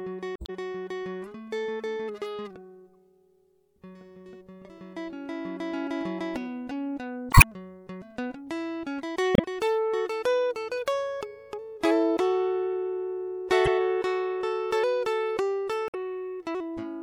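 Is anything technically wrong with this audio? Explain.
Yes. The music has damaged data in a compressed stream at 0.36–0.50 s, 7.30–7.44 s, 9.33–9.40 s, 13.66–13.68 s and 15.86–15.95 s. Corrupted bytes make the decoder misread frames and resynchronise, producing brief chirps, squawks, clicks or short holes. The first event also adds about 20 ms of extra sound.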